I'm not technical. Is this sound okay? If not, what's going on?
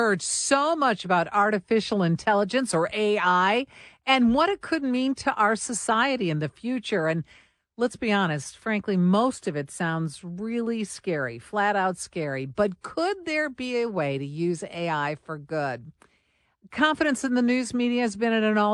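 Yes, from a technical standpoint this speech recording is in good shape, with nothing in the signal itself that needs fixing.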